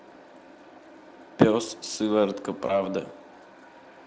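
At 2.67 s there's VoIP packet loss concealed by the speech codec: about 20 ms of audio went missing, Speex guessed it from the previous frame, and things sound smeared and weak until about 2.81 s.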